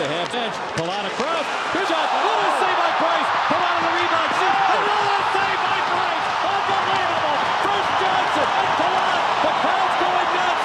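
The audio lurches forward five times: at 0.32 s, 1.84 to 1.86 s, 4.72 to 4.74 s, 7.35 s and 8.55 to 8.57 s. These are compressed frames skipped. Whole blocks of coded audio never play, losing roughly 100 to 200 ms each time, which points to runs of about five to ten frames that were missing or rejected by the decoder.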